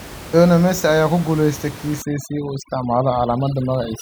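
From 2.02 s to the end, overdone noise removal sets in. The room noise, about 16 dB below the speech before then, drops and breaks up into twinkling specks. Unlike codec smearing, the damage follows the noise floor, gating quiet bands.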